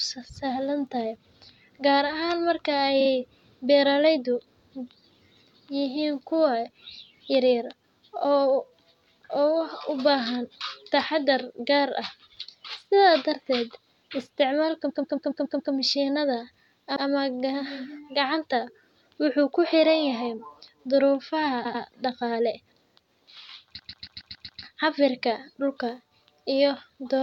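At 3.00, 14.89, 16.95, 21.64 and 23.78 s the speech stutters with repeated frames: a compressed block of about 46, 139, 93, 93 and 139 ms is played again, two, six, one, two and six extra times. The longest runs add roughly 0.84 s each. Unlike a dropout, nothing goes missing. The identical fragment loops, and the clip grows longer.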